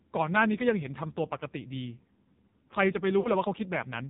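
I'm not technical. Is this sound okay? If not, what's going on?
No. The whole recording passed through the AMR narrowband mobile codec, the compression used on older mobile phone calls. Everything above about 4 kHz is cut away, so the voice sounds muffled and thin, and heavy squeezing makes it buzzy and synthetic.

There are also lost AMR speech frames from about 3.20 to 3.31 s. Roughly 40 ms of the signal was garbled by radio errors and thrown out, which fits two missing frames. The decoder stretched the last good sound and faded it, giving a brief smeared dip before the voice returns somewhat rough.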